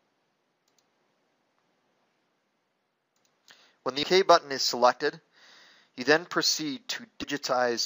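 Compressed frames skipped at 4.02 s and 7.22 s: missing or rejected frames go unplayed, so the sound jumps ahead roughly 150 ms, then 70 ms.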